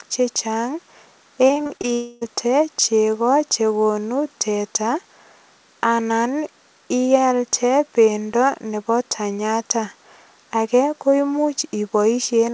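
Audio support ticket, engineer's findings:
Repeated packet loss (robotic sound), 1.48–1.85 s. Network losing or delaying packets in a burst: six separate gaps in 0.37 s, longest 21 ms. Decoder patches each by extending the previous fragment, so about a third of the stretch is synthetic. Audible as choppy, robotic speech with small pieces missing.

Long network dropout, 1.93–2.23 s, just before "chego chegonu teta". Likely a network outage: about 0.28 s of speech never arrived. Receiver fills the whole hole by continuing the last sound, heard as a fading buzz or hiss with no silent stretch. Speech resumes at "chego chegonu teta" with the lost part gone. The G.722 call path is band-limited, with nothing above 8 kHz.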